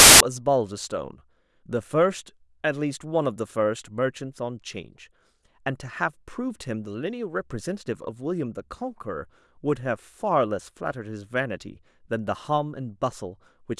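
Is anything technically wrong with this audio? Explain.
Yes. From 0.0 to 0.20 s the speech is preceded by a burst of very loud white noise with abrupt edges. This is file tags played as audio: an embedded cover picture, stored as compressed data, was decoded as samples, and its random-looking bytes come out as static.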